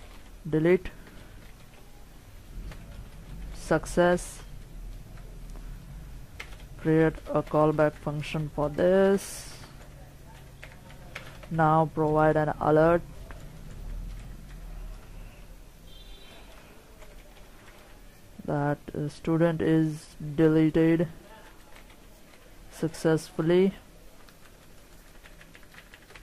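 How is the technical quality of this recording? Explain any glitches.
No audible glitches or faults.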